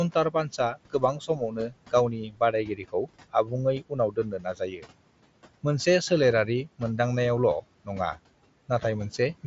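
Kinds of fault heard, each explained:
Noise suppressor artifacts: A noise suppressor works band by band and frame by frame, turning down whatever it judges to be steady background, here by about 18 dB. The room noise, sitting about 19 dB under the speech, drops away in the gaps and comes back beneath the talking, so the background pumps with the speech rather than staying constant.
Speech cut by the noise suppressor: The suppressor mistook parts of the speech for noise and pulled them down along with the background. It happens in four stretches, from 0.14 to 1.93 s, 2.19 to 3.08 s, 3.30 to 3.52 s and 4.11 to 4.86 s, with dips reaching about 14 to 18 dB. Over half a second in the first stretch and shorter patches in the others, soft sounds and word endings come out swallowed and faint.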